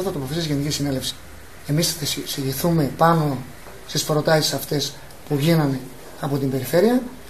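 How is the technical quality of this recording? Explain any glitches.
One fault is audible: a brief skip near the start.

Compressed frames skipped, 1.09 to 1.11 s: the audio jumps forward by roughly 50 ms, about two frames of 23.2 ms each, which fits a 1024-sample codec frame at 44.1 kHz. The decoder played nothing for those frames, either because they were missing from the stream or because it rejected them as corrupt, so the timeline simply advances.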